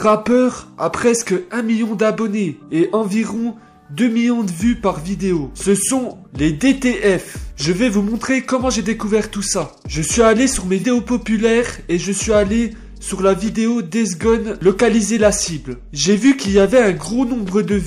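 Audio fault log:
10.80–10.84 s compressed frames skipped: the sound jumps forward. Around 150 ms of audio is lost, which fits roughly three whole frames of about 46.4 ms each being dropped because they were missing or rejected by the decoder as damaged.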